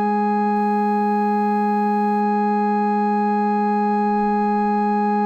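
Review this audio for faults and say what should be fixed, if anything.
From 0.56 to 2.21 s the music turns grainy, likely low bit depth without dither, consistent with 8-bit rounding: the waveform shows stair-steps, and the spectrogram shows signal-following noise about 45 dB down. Apply dither whenever word length is reduced.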